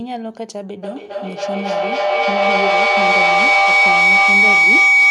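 Speech with a feedback howl that starts at 0.83 s and runs to the end of the clip. Sound from a loudspeaker is being picked up again by a microphone in the same room. Each pass round that loop comes back louder, so the repeats grow and narrow to a tone near 2 kHz. The loop's delay is roughly a third of a second, and the tone peaks about 13 dB above the speech.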